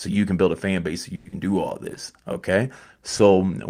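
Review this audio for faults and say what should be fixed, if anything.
From 1.15 to 1.35 s, between "a fan base so" and "do all", the signal stops carrying new content. The last sound is stretched into a fading synthetic buzz for about 170 ms, and roughly 80 ms of audio is missing when playback resumes at "do all". This is likely a long network dropout: packets stopped arriving, the receiver's concealment filled the gap, and the lost segment was never recovered. Afterwards the playout delay rises by around 50 ms. To prevent this, add forward error correction or redundancy and make the network path more reliable.

The jitter buffer slow-down runs from 1.79 to 2.25 s, right after "do all". The receiver rebuilds its reserve by repeating single pitch periods and fragments of pauses. This adds 61 ms and plays the passage at 88% speed without changing pitch, so sounds are drawn out. To prevent this, set the jitter buffer to adapt its target delay more gradually, or raise the starting delay so it is not caught short.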